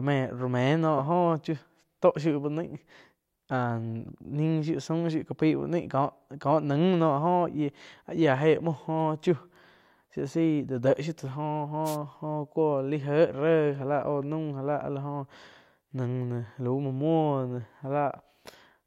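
Speech recorded through what sounds like an analogue FM radio mic, and there's one wireless microphone noise hit to flag. From about 11.84 to 11.97 s, roughly an eighth of a second, a quick swish of static washes over the voice. That's the radio link fading as reflected copies of the signal cancel the direct one at the receiver, so the receiver's own noise floor jumps up before the signal recovers.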